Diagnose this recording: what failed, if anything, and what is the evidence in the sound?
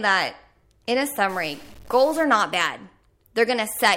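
From 1.29 to 2.24 s, between "in a" and "not bad", the speech takes on a harsh, buzzy distortion, and the gaps in that stretch fill with a steady noise floor at about -40 dBFS instead of falling silent. That fits a stuck bit, likely at the converter or its data lines: one bit held fixed shifts roughly half the samples by a step of that size, following the waveform, and near zero it flips with the sign, turning pauses into noise.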